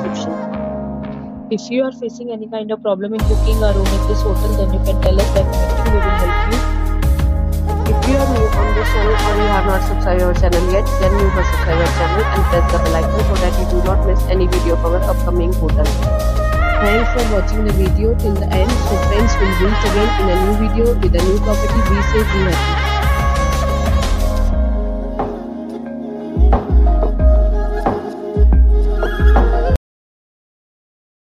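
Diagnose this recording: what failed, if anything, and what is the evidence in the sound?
Cut-off end, at the storage or buffer stage. At 29.76 s the audio stops dead in the middle of a sound and falls straight to digital silence with no decay, holding there for about 1.6 s. The final buffers were evidently never written out, so playback just hits nothing.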